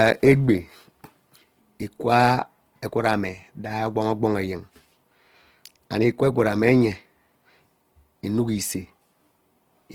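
Speech, carrying Opus compression damage throughout that is plainly audible: the voice sounds grainy and rough, with noisy texture where bands are filled rather than left empty. Content still reaches about 20.2 kHz, consistent with the likely cause, a low-rate fullband CELT encode near 16 kbps.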